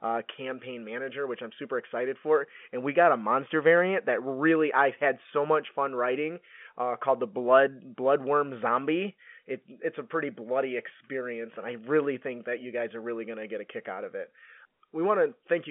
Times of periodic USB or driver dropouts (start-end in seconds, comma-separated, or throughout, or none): none